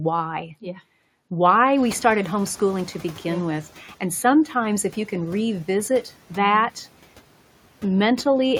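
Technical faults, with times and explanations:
1.77 to 3.67 s, noise suppressor catching up. Around 2 s the room noise jumps by about 20 dB. The suppressor's noise estimate lags, so the noise leaks through under the speech. Over 1.9 s the estimate adapts and the noise sinks by about 7 dB.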